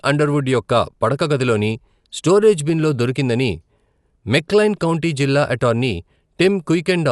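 From start to finish the speech sounds dull and band-limited. Nothing is heard above about 11.4 kHz. Around voiced tones there is a rough, fluttering noise that comes and goes. The damage is plainly audible. The likely cause is Dolby Digital compression at a low rate that fits a 64 kbps stream. The encoder trims the top band and starves many frequency lines of bits. The decoder fills those gaps with dither noise, which makes the flutter.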